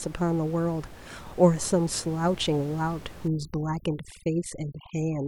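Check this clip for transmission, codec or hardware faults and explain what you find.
One fault is present, against steady room noise sitting about 19 dB below the speech.

Overdone noise removal runs from 3.28 s to the end of the clip at 5.27 s. A noise reducer set far too aggressively pushes individual frequency bands down or out whenever their level comes close to its estimate of the noise floor, so the softer parts of the speech are stripped away along with the noise. The background drops away and breaks up into twinkling specks.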